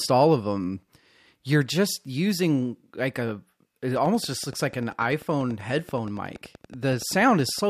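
A steady ticking comes in at 3.96 s and runs to 7.6 s, near the end of the speech: a train of clicks of much the same shape, about as loud as the speech itself, audible through the words and across the pauses alike. They arrive evenly at 10.5 per second, some forty in all. Such a regular, uniform pulse train is likely interference from nearby equipment or a faulty connection or power supply injecting a spike into the signal path.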